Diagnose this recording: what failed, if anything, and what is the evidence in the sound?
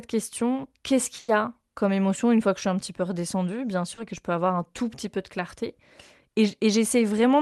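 Network trouble first: there's a burst of packet loss from 1.19 to 1.29 s, going through the Opus call path with its 12 kHz top end. About 90 ms never arrived, and the decoder stretched the last sound and faded it out before jumping ahead, so that stretch is simply gone.

Second network hiccup at 3.94 to 3.98 s. This one's a short concealed packet loss of about 30 ms. The receiver patched it by extrapolating the preceding sound and crossfading back, which you hear as a quick smear rather than a dropout.

Then at 4.18 s there's a DC step, most likely from the converter. The waveform's zero line jumps, giving a low thump, and the offset bleeds away through what behaves like a 5 Hz high-pass, so it settles without further clicks.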